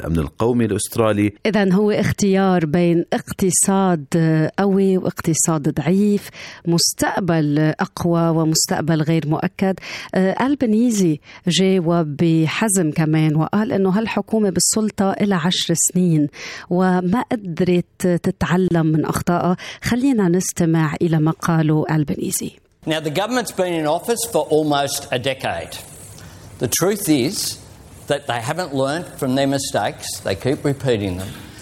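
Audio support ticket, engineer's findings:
Gap at a join of encoded pieces, 18.68–18.71 s. Symptom: brief dropout, about 28 ms gap cutting into continuous sound, which resumes where it stopped. Component: segment concatenation. Mechanism: separately encoded pieces joined untrimmed, so encoder delay and last-frame padding remain.

Visual: waveform shows a notch with edges smeared by the codec; spectrogram shows a thin full-band vertical blank stripe at 18.68 s.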